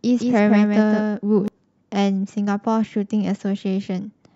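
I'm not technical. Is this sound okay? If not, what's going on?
No. There is a doubled audio track from the very start until 1.48 s: the speech is heard twice, with a second copy trailing about 0.15 s behind and playing a little more quietly. It sounds like a flat, clean echo, with no room sound, and it stops abruptly at 1.48 s. The likely cause is the same speech being picked up a second time through a slower route, or an edit that left two out-of-step copies overlapping.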